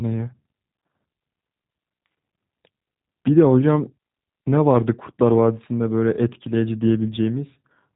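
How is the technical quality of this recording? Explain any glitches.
Quality's limited: the whole recording has been through a low-rate telephony codec, and the damage is plainly audible.

The G.729 codec is on it from start to finish. Nothing above about 3.8 kHz survives, so the speech sounds boxed-in and dull. Because the voice is rebuilt from a vocal tract model, a pitch predictor and a few pulses per frame, it has a rough, slightly synthetic edge, which fits the 8 kbit/s G.729A variant.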